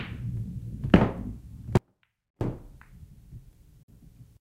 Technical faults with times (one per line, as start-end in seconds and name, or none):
1.77-2.41 audio dropout to a faint residue
3.83-3.89 Bluetooth dropout